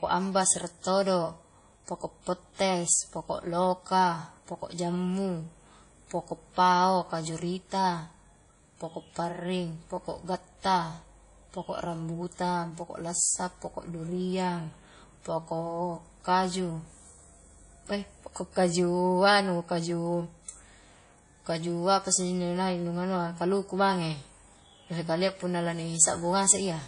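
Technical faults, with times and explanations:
Throughout, WMA compression: the speech carries a ringing, washy quality, with a hiss that swells and fades along with the voice. Fine detail is smeared over tens of milliseconds around each sound, and weaker high-frequency components drop out. The damage is plainly audible and is likely the result of coding with a long-block transform codec such as WMA at a low bitrate, consistent with roughly 32 kbps.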